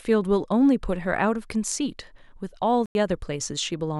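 Speech, with one clear problem: a corrupt frame muted at 2.86 to 2.95 s. The sound just drops to silence for about 94 ms, cutting in abruptly instead of fading, and then picks up right where it should, so the timing stays intact. That's what you get when a compressed frame arrives with flipped bits, the decoder rejects it, and the player fills the gap with silence. The length points to a single lost frame.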